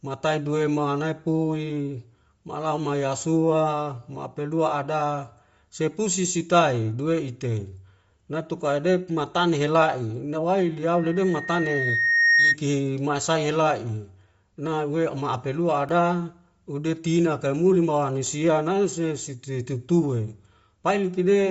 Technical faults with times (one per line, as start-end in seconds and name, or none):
0.00-21.51 Bluetooth LC3 compression
10.94-12.57 loudspeaker feedback squeal
15.89 repeated buffer
18.27 repeated buffer